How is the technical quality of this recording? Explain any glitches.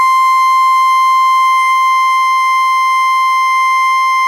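The technical quality of this music recording is sound, with no glitches to explain.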